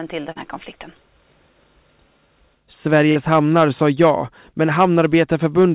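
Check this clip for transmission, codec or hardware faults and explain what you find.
The clip has two kinds of fault: two brief dropouts that were patched over, and two stretches of hard clipping. The audio has also passed through a call path whose band ends at about 4 kHz, which fits a narrowband telephone codec.

Short concealed packet loss occurs at 0.32 to 0.37 s, just before "här konflikten", and again at 3.11 to 3.17 s. Each is a quick smear where the sound briefly turns blurred and stretched. About 40 ms of the call's data arrived too late to use both times. The receiver's decoder invented a replacement by carrying the preceding sound forward, for about 32 ms in the first gap and 40 ms in the second, then crossfaded back into real audio.

Hard clipping runs from 2.95 to 4.1 s and from 4.79 to 5.65 s. The louder parts turn gritty and crackly, with a fuzzy edge on the peaks. The signal was driven about 4 dB beyond what one stage could carry, so the tops of the waveform were sliced flat. 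Those flattened peaks generate extra harmonics high in the spectrum, which is the harshness heard. The second dropout falls inside the first clipped stretch, so the two faults overlap there.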